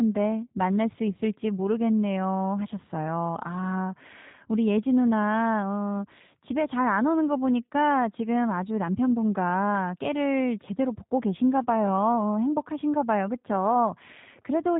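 From start to end, the speech carries G.729 codec damage, plainly audible: a rough, slightly synthetic quality from a pitch predictor and a few pulses per frame, which fits 8 kbit/s G.729A. Nothing passes above 3.8 kHz, yet unlike simple low-pass filtering, the voice itself sounds rebuilt.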